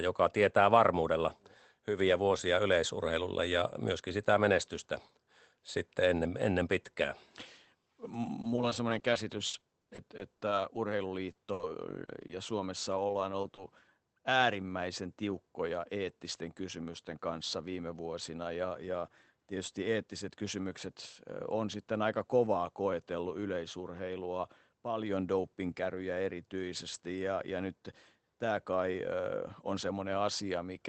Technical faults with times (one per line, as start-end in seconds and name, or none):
8.25-10.91 repeated packet loss (robotic sound)
11.31-11.37 short concealed packet loss
11.53-11.61 burst of packet loss
11.59 lost packet rebuilt from error correction
12.05-13.59 scattered short gaps